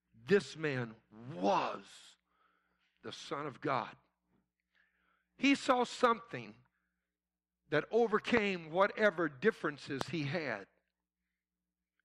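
A sudden voltage step, likely from a plug, switch, static discharge or driver glitch, enters the signal path twice, and the following circuitry shapes each step into a brief pulse. The result is a loud pop, a single sharp crack roughly 20 dB above the speech, at 8.37 to 8.39 s and again at 10.01 to 10.03 s, just before "he had". Each pop sits on top of the speech, which carries on unbroken beneath it.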